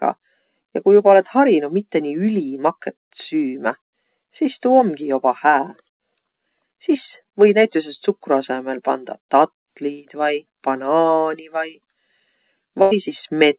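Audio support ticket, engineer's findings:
Burst of packet loss, 12.82 to 12.93 s. Concealment fill of about 91 ms: last sound held and fading, then speech resumes with about 100 ms skipped. Probable component: network/jitter buffer on the call path, which has a 4 kHz band edge that fits G.711 mu-law.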